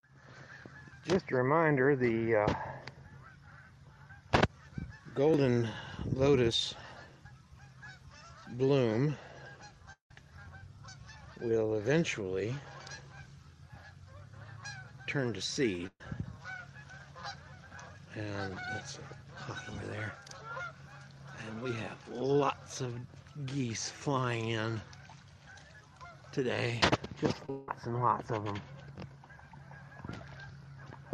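A long network dropout runs from 9.92 to 10.11 s. The last sound is carried on as a fading buzz or hiss, then about 120 ms of near-silence follows, and roughly 180 ms of audio is skipped when playback resumes. The likely cause is a stretch where no packets arrived and the receiver padded the gap itself.

A burst of packet loss follows at 15.87 to 16.01 s. Several consecutive packets went missing or arrived too late, so the decoder extended the preceding sound and turned it down, leaving a brief dip of about 50 ms. About 120 ms of material is gone when the audio picks up again.

Short concealed packet loss appears at 27.46 to 27.49 s. Roughly 30 ms failed to reach the decoder in time, and the gap was patched by continuing the prior sound and blending back in. It is heard as a quick smear or wobble rather than a clear break.

A second long network dropout comes almost at once, from 27.50 to 27.69 s. 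This time the fill carries through without falling to silence, so it sounds like a held, decaying smear lasting about 170 ms, with that much audio missing afterward.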